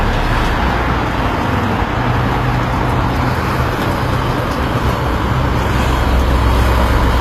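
Throughout, the treble sounds gritty and plainly metallic, with nothing above 15.4 kHz, likely HE-AAC compression at a low bitrate near 24 kbps, rebuilding highs from copied lower bands.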